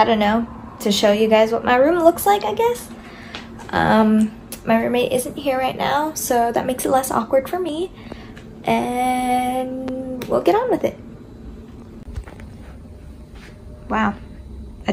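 A loud pop arrives at about 9.88 to 9.91 s: a single sharp pulse, a few decibels above the surrounding level, lasting only a few hundredths of a second while the sound continues underneath without a break. The abruptness and the short, shaped tail point to a sudden voltage step entering the signal chain, likely from a plug being seated, a switch, a static discharge or a driver glitch, which the downstream circuitry then smoothed into this brief thump.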